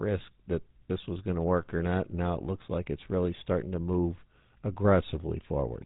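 From start to finish the speech carries the signature of the GSM full-rate codec. The voice is rebuilt from a model of the vocal tract excited by evenly spaced pulses, so fine detail in the excitation is discarded, leaving a plainly audible buzzy, gravelly roughness in the voice. The band stops at about 3.9 kHz, which removes sibilant air and makes the result dull and narrow, consistent with a 13 kbps mobile-telephone link.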